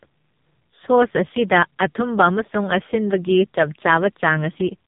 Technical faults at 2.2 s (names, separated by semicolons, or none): AMR narrowband mobile codec